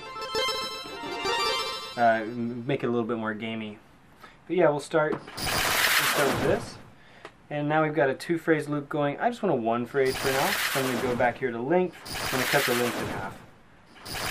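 No technical faults can be heard anywhere in this recording.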